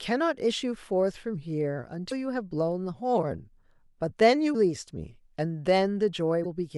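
Short glitches break into the speech at 2.08 to 2.12 s, 4.51 to 4.55 s and 6.42 to 6.46 s, each about 40 ms long. They come from damaged data in a compressed stream: corrupted bytes cause the decoder to misread frames and lose sync before it locks onto the next valid frame.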